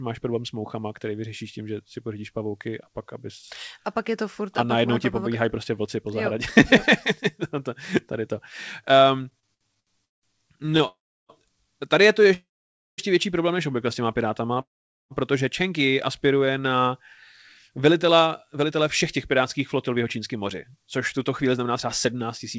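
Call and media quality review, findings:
Repeated stalls (stutter), 9.30–12.28 s, ending before "větší problém než obvykle": 13 gaps, longest 183 ms, about 470 ms filled, nothing lost. Jitter buffer repeatedly ran empty on late packets.

Call audio freeze at 10.87–11.31 s, 12.34–13.00 s (before "větší problém než obvykle") and 14.61–15.13 s: fading fill, then silence of about 340, 540 and 450 ms. Likely jitter buffer underrun from held-up packets. Gap inserted, nothing missing.

Jitter buffer slow-down, 14.42–16.70 s, after "než obvykle s těma": playback at 96% speed, same pitch, about 100 ms added by repeating pitch periods to rebuild the buffer reserve.

Short stall from a late packet, 14.54–14.58 s: last sound stretched 24 ms until the packet arrived, then playback continued from the same point.

Jitter buffer speed-up, 17.79–22.57 s: playback at 106% speed, pitch unchanged, roughly a third of a second cut as short pitch-period pieces to drain excess buffered delay. 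Sounds hurried.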